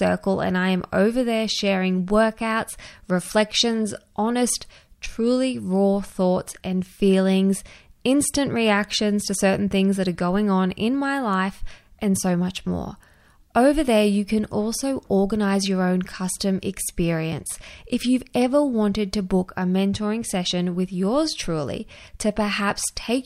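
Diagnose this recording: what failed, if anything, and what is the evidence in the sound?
Nothing failed in this recording, and the sound carries no evidence of any fault.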